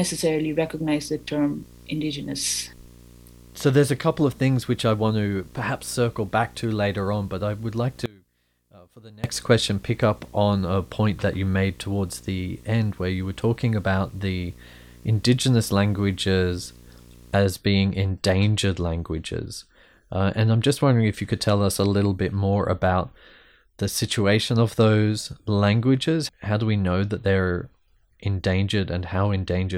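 A speech recording with two faults. From the start to 17.38 s, a video or display buzz sits under the speech. It is a steady 60 Hz buzz with a gritty hash riding above it. The buzz runs roughly 25 dB below the speech. This pattern points to a screen or video cable coupling its field-rate signal into the audio path. The buzz ends at 17.38 s. Between 8.06 s and 9.24 s, the speech suddenly collapses by about 24 dB. What remains is a faint copy, with the centred body gone. Full level returns at 9.24 s. The likely cause is one channel inverted, meaning one side of the stereo pair has reversed polarity. When the two channels are summed to mono, everything common to both cancels. Only the small difference between them survives.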